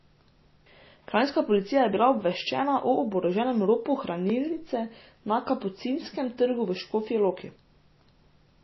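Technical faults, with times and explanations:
Throughout, MP3 compression: the speech sounds watery and swirly, with plainly audible codec damage and nothing above 5.8 kHz, which points to a low bitrate around 24 kbps and is likely an MP3 encode. Starved of bits, the encoder cuts the treble at a fixed point and drops weak frequency lines that flicker on and off between frames. On a spectrogram the top edge is a flat shelf at 5.8 kHz, with patchy, blocky holes below it.
4.30 s, block of digital silence: a single tick where the signal drops out for 1.45 ms and snaps back with no fade, which fits a 64-sample block going unfilled. The abrupt edges on either side produce the click, and the gap itself is too brief to hear as a hole. On the waveform it shows as a tiny flat line near zero; on a spectrogram, a thin vertical broadband stripe.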